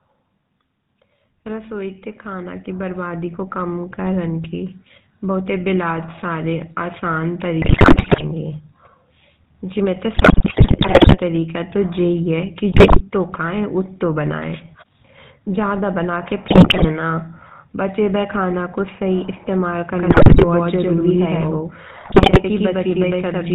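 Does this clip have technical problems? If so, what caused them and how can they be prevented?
Yes. The speech throughout carries the buzzy, gravelly roughness of the GSM full-rate codec, with nothing above 4 kHz, which fits 13 kbps full-rate GSM. Unlike simple band-limiting, the excitation itself sounds coarse. Using a wideband codec such as AMR-WB or EVS prevents it.

Automatic gain rising lifts voice and background together by about 10 dB between 1.46 and 4.81 s. It is a slow swell, not a step. Setting a proper input level, or disabling AGC, prevents it.

GSM bit errors cause squawks, pops and gargling at 7.62–8.23 s (just after "बहुताई बिलात सारे आसान"), 10.14–11.18, 12.72–13.02, 16.48–16.86, 20.10–20.45 and 22.00–22.40 s. These are level blow-ups and spectral bends, not dropouts. A stronger radio link or better error protection prevents them.

A doubled audio track runs from 19.95 s (after "खाना को सही इस्तेमाल") to the end. 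A full-band copy at roughly equal level trails by about a tenth of a second. It starts abruptly and has no decay, unlike a room echo. It is likely a second capture path or a duplicated edit. Muting the extra path or removing the duplicate clip prevents it.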